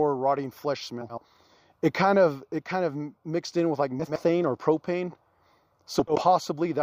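At 1.01 to 1.22 s, just after "rotting flesh", at 3.99 to 4.20 s between "mixed in with like" and "or propane", and at 5.99 to 6.22 s, frames arrive out of order: two adjacent blocks of about 80 ms are decoded swapped, so each stretch plays with its halves exchanged. It sounds like a garbled flutter. A spectrogram shows formant tracks jumping abruptly at three splice points, with no time lost.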